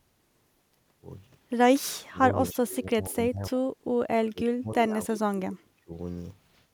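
From 1.91 to 2.19 s and again from 2.35 to 3.72 s, the echo canceller likely treated simultaneous talk as echo, causing speech suppressed in double talk: the voice dips by up to about 40 dB, then about 25 dB. At 2.52 to 2.56 s, an echo leak probably let loudspeaker pickup return, a faint scrap about 25 dB down, delayed 292 ms. From 4.28 to 5.95 s, suppression returns, cutting the voice by about 40 dB.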